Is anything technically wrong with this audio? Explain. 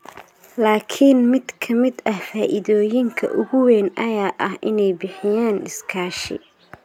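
No, nothing technically wrong can be heard in this speech recording. The audio carries no audible faults anywhere in the clip.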